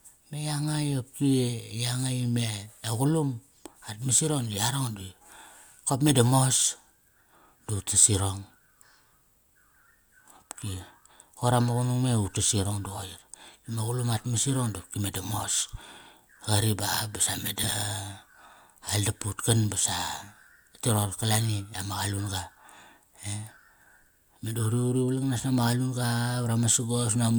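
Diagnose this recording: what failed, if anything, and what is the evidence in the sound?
What failed is frame ordering at the network or packet stage, ahead of the decoder: two spots of frames out of order. Right after "kop me da", at 6.55 to 6.64 s, and again at 17.63 to 17.73 s, a short stretch plays with its halves swapped, giving a garbled flutter. Each swapped block runs about 40 ms, which fits pairs of short codec frames being decoded in the wrong sequence. Nothing goes missing; the audio is just shuffled.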